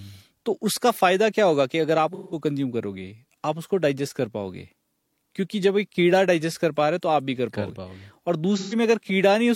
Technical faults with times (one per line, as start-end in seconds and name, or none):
2.14-2.40 AAC frame loss with concealment
8.56-8.74 AAC frame loss with concealment